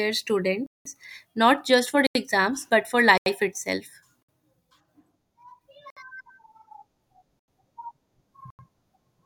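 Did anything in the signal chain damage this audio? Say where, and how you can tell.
Yes. The speech has seven blocks of digital silence, which points to the driver or buffer stage. They fall at 0.66–0.85 s, 2.07–2.15 s (just before "exams but"), 3.18–3.26 s, 4.23–4.29 s, 5.90–5.97 s, 7.39–7.48 s and 8.50–8.59 s. The gaps run from 60 to 189 ms. The sound drops straight to silence and returns with no fade. Four gaps last exactly 85.33 ms, which fits a 4096-sample buffer not filled in time.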